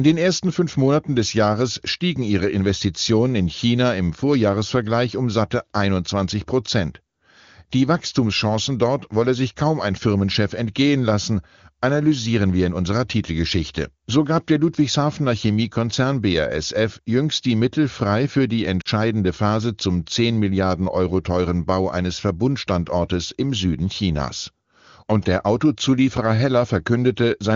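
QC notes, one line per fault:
18.81 to 18.88 s, lost AMR speech frames: about 40 ms, consistent with two dropped frames, where the wideband decoder repeats its last pitch and vocal-tract settings at falling gain, giving a fade to near silence within the two frames rather than the hard silent gap of a clean dropout.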